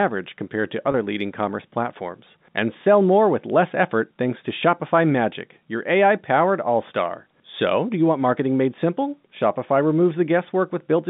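At 0.92 to 0.94 s there is packet loss with pitch repetition. About 20 ms of speech went missing, which fits a single lost packet. The receiver filled the gap by repeating the last pitch period. It sounds like a brief, slightly held buzz over the narrow G.711 telephone band.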